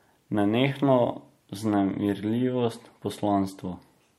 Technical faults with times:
1.14-4.19 adaptive stream at a lower bitrate

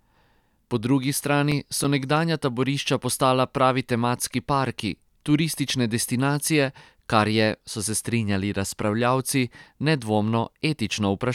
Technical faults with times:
1.35-2.17 CD scratch ticks
5.38-6.35 CD scratch ticks

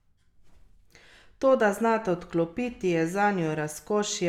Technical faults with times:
none

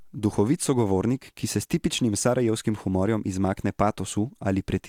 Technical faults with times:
none

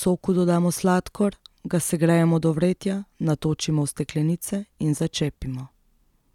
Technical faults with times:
none

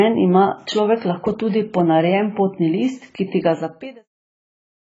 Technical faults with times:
0.00-4.80 AAC compression

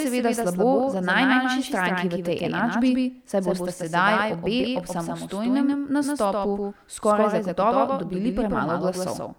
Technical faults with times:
0.00-9.39 doubled audio track

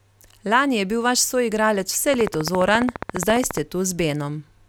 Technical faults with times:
2.14-3.58 train of clicks

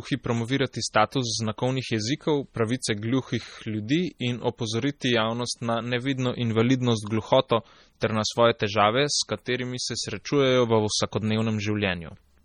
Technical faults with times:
0.00-12.45 MP3 compression
0.73 pre-echo
8.00 pre-echo
8.59 pre-echo

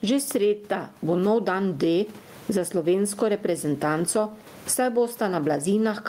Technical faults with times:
0.00-6.08 gain pumping

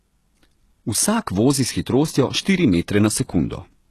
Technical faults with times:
0.00-3.91 HE-AAC compression

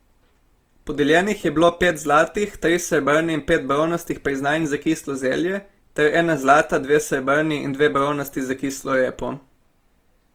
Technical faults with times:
0.00-10.34 Opus compression

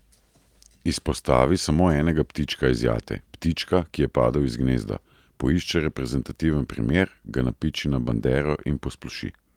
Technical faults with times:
none

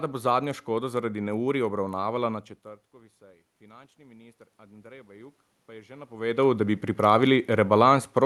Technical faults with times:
2.96-7.39 automatic gain rising

